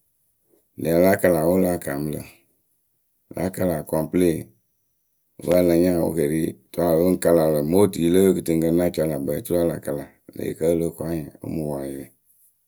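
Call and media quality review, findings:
Loose connector crackle, 5.51 to 5.61 s, just before "a la nya". Irregular burst of scratchy crackle lasting about 0.1 s. Probable component: worn or dirty jack, plug or cable contact. Mechanism: intermittent make-and-break chops the speech signal, and any DC on the line adds pops. Check and reseat connectors, clean contacts, replace the cable if the crackle recurs.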